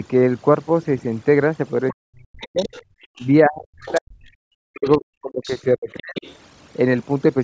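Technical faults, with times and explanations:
Throughout, overdone noise removal: the background drops and breaks up into twinkling, warbling specks. The reduction was set too strong, so individual frequency bands close to the estimated noise floor are cut deeply or switched off, and the quieter parts of the speech vanish with them. Unlike the echo canceller's gating, this is constant and frequency-selective, not a brief drop in the whole signal.
1.9 to 3.26 s, 3.88 to 4.01 s and 4.85 to 6.36 s, other side's voice leaking through: a second voice sits some 20 dB under the main talker. This is likely the far end playing on the talker's loudspeaker and surviving the echo canceller into the microphone. What separates it from noise-removal artefacts is that it is a voice, not spectral specks.
1.92 to 6.22 s, speech suppressed in double talk: the main voice repeatedly dips, dulls at the top or breaks into pieces, in places by around 40 dB, adding up to roughly three seconds of affected sound. 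It is likely caused by the canceller failing to tell its own talker from the loudspeaker echo while both sides spoke, and turning everything down. Being confined to this span distinguishes it from the steady noise removal.
2.99 to 3.15 s, background gated by the echo canceller: the room sound drops by about 40 dB for around a tenth of a second, then returns. The canceller clamped the microphone hard while the loudspeaker was active and released it once the echo passed. Unlike the double-talk suppression, it is a single short, near-total cut of the ambience rather than a prolonged chewing of the voice. The call's microphone processing, with nothing above 8 kHz, is a normal stage, not a fault.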